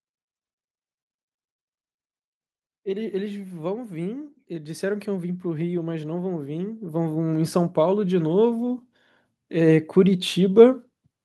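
Speech, with automatic gain rising from 2.82 s to 8.83 s: the gain control, judging the input too quiet, lifts the level by about 15 dB over six seconds. Unlike a talker moving closer, the background noise swells along with the voice.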